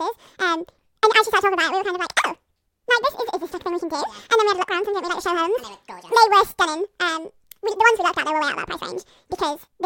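Throughout, the speech races at double speed and an octave higher, 12 semitones up, because the audio was read two samples at a time, treating pairs as single frames.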